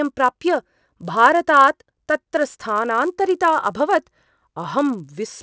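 Right through the speech there's a faint buzz at 100 Hz, riding on the signal and gone in the gaps. That's a resampler restarted on every block: the 48 kHz to 16 kHz conversion ran on 10 ms chunks independently, so each block edge leaves a tiny glitch.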